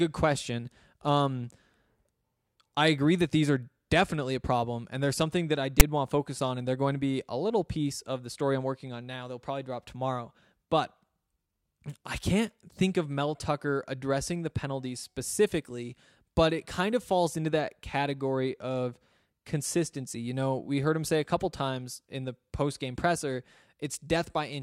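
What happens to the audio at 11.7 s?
Nothing goes wrong at 11.7 s: the speech runs through that moment intact, with no dropout, click, distortion or other fault.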